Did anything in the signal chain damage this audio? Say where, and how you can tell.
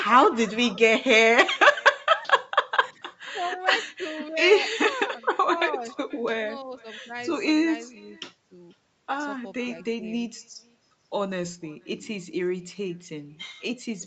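Yes. Throughout, speech returns about half a second later as a faint, thinner copy about 25 dB down: far-end loudspeaker pickup, echo with no canceller.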